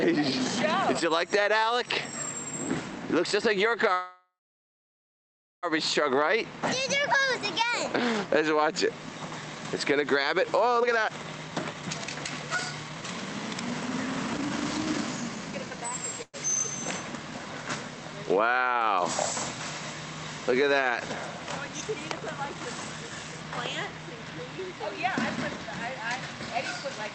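This audio comes through a call path with its high end cut off around 8 kHz, consistent with Opus at a modest bitrate, and shows two kinds of fault. Call audio freezes occur at 3.93 to 5.65 s and 16.22 to 16.36 s. In the first, the last sound is stretched into a fading fill that drops to about 1.3 s of silence before the audio resumes exactly where it stopped. That inserts a 1.69 s gap and nothing is lost. The second is a brief 0.11 s hold. The likely cause is delayed packets draining the jitter buffer. Jitter buffer speed-up follows at 10.78 to 15.78 s, where playback runs at 128% speed with the pitch unchanged and sounds noticeably hurried, and again at 22.09 to 27.11 s at a subtler 105%. In both, the receiver trims short pitch-period slices repeatedly to shed excess buffered delay, roughly a second and a half in the first stretch and about a third of a second in the second.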